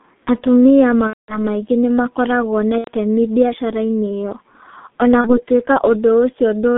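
The whole speech clip passes through a G.723.1 codec. The band runs only from about 150 Hz to 3.7 kHz, so it sounds muffled. The damage is heavy, in line with a rate near 6.3 kbit/s. The coder works in 30 ms frames and adapts its voice model slowly. The voice turns hoarse, and consonants blur together.

At 1.07 s, VoIP packet loss concealed by the speech codec begins. It lasts until 1.38 s, just before "maingĩ nĩ makoragwo na". The gap points to about seven lost 30 ms frames. The decoder stretches its last pitch and filter into a fading buzz. At 2.78 to 2.91 s, right after "maingĩ nĩ makoragwo na", a shorter gap of roughly three frames does the same. A third, single-frame dropout sits at 5.21 to 5.42 s. The voice stays weak briefly after each one.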